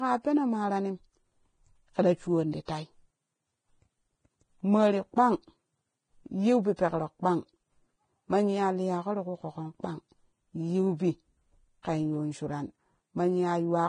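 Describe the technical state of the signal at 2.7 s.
Right around there, from 2.66 to 2.68 s, there's a pre-echo: a short hiss of about 27 ms arrives just ahead of a sharp onset. The codec spread its quantisation noise across the whole transform block, so noise sized for the loud attack leaks into the quiet bit before it, and the attack comes out smeared.

Underneath that, the whole stretch sounds hissy and grainy, with nothing above 9.7 kHz. That's likely heavy Vorbis compression, consistent with a bitrate around 22 kbps, where the treble is quantised so coarsely it turns to noise.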